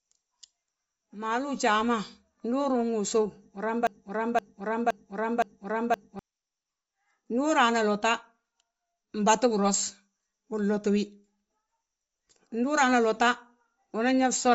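Throughout the speech, the transmission was likely squeezed through Bluetooth LC3 compression at a low bitrate, around 32 kbps with 10 ms frames. The codec discards the upper spectrum, so nothing sounds above 7.7 kHz, and the speech has a plainly audible grainy, breathy edge.

From 3.87 s to 6.19 s, the player or stream likely stalled and kept resending its last buffered fragment, causing a broken-record loop. A 0.52 s slice repeats four times back to back, and the audio that should have played during that stretch is lost.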